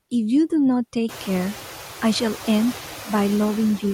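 Noise suppressor artifacts run through the whole clip. The suppressor estimates the steady background in each frequency band and lowers those bands frame by frame, but here it removes only about 2 dB, so the noise is barely reduced. When the room noise rises by about 19 dB at around one second, it ends up about 16 dB below the speech.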